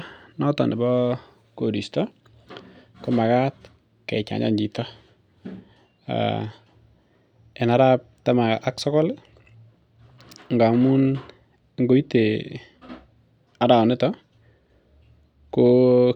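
Listening along the whole recording, nothing comes up as a technical fault, so there's no moment worth flagging here.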